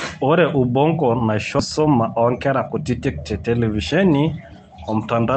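A speech recording that jumps forward at about 1.6 s: that's a skip ahead, where roughly 0.7 s of audio was dropped and the two sides spliced almost directly with no gap. Then from 1.79 to 3.43 s there's a jitter buffer speed-up: the receiver trimmed tiny pitch-period slices to drain the extra buffered audio, so speech runs about 7% fast at unchanged pitch, shaving off around 150 ms and sounding a bit hurried. All of this rides on a call-codec path whose top end stops at 8 kHz, which fits Opus at a modest bitrate.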